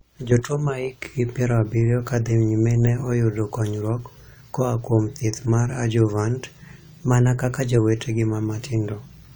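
At 6.46 s, right after "kuom thieth mar 'adjuvant'", the speech suddenly runs fast and sharp. Speed rises by 5.5 percent. Pitch rises by about 93 cents, close to a semitone. The two move together, so the sound is sped up rather than retuned. At 7.79 s it snaps back to normal. This is likely a drift correction step. Clock-matching software jumped its playback rate to drain or refill a buffer, then returned.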